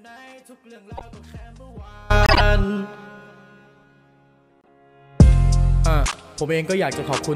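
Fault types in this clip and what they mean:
Audio dropout to a faint residue: The clip opens in the middle of one. For the first 2.1 s the real signal is missing, and only a faint leak of it remains, around 30 dB below normal level. The full sound then snaps back in abruptly rather than fading up. That points to a break in the wanted signal while the path after it stayed live, most likely a lost feed or a brief disconnect upstream.
Corrupt frame decoded: Four short errors come from the decoder playing damaged compressed frames, where flipped bits put energy at the wrong frequencies. The first, at 0.97 to 1.02 s, is a moderate error over the dropout residue. The loudest, at 2.23 to 2.41 s, is a strong error spanning several frames. The one at 4.50 to 4.68 s is barely audible, and the last, at 6.06 to 6.16 s, is a fairly loud error.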